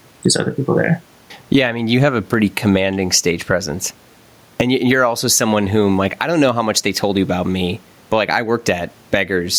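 Throughout the speech, gain pumping swings the level by roughly 15 dB, likely from an overdriven input and fast limiter. Loud and soft parts end up closer in level and the sound is squashed, while the quiet room noise sits about 43 dB below the speech.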